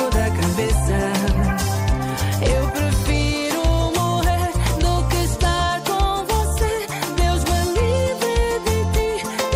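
Nothing is technically wrong with the audio in this clip.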